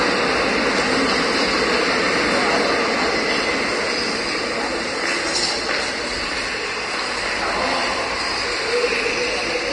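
Throughout the clip, nothing sits above about 10.6 kHz, and the remaining treble is grainy and hissy, with roughened tones and smeared attacks. This is likely Vorbis compression at a low bitrate, around 33 kbps, where coarse treble quantisation turns fine detail into noise.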